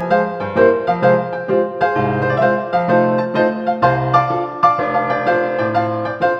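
From start to end, channel delay (comb filtering) colours the sound. One channel lags by around 5 ms before the mono sum, cancelling evenly spaced frequencies from near 100 Hz upward. It sounds hollow and phasey, and a spectrogram shows steady, regularly spaced dark horizontal notch bands.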